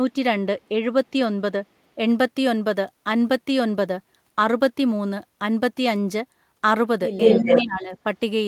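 At 0.63 s there's a faint echo leak, a copy of the speech about 176 ms late, way under the main signal, likely a far-end loudspeaker echo the canceller missed. From 7.2 to 7.62 s it's back at the same delay, now roughly as loud as the speech or a touch louder. Overlapping that, from 7.35 to 8.05 s, you get speech suppressed in double talk. The near voice ducks by something like 15 dB in pieces, about half a second in total, likely because the canceller couldn't tell the talker from the echo and turned both down.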